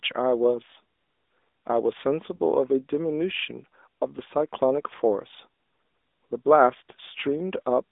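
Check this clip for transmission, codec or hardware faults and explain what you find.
Two faults here, one running the whole way and one brief glitch.

AMR narrowband mobile codec: for the whole clip, the speech sits in a roughly 250 Hz to 3.6 kHz band and sounds plainly buzzy and synthetic, which points to a mid-rate AMR-NB mode around 10 kbps.

Lost AMR speech frames: at 2.36 to 2.40 s there's a quick dip and warble, probably one 20 ms frame filled in by the decoder from the last good one.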